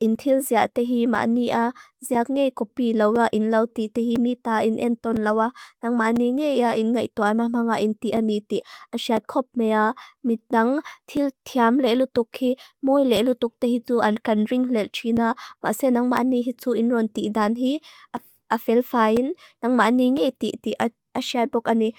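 From 0.15 s to 21.17 s, periodic USB or driver dropouts recur every 1.0 s: about twenty brief gaps of a few milliseconds, filled with silence, heard as regular ticks under the speech.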